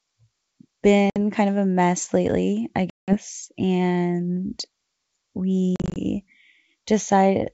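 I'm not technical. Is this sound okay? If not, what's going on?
No. The speech cuts out in hard-edged silent gaps: about 60 ms at 1.10 s, just before "kind of a mess"; 180 ms at 2.90 s, just after "a mess lately I"; and several brief breaks between 5.76 and 5.97 s. Each time the sound comes back, it is briefly slightly distorted. This is packet loss on an ADPCM call. Chunks of the call went missing and were replaced by silence, and the receiving end needed a moment to fall back into step with the sender.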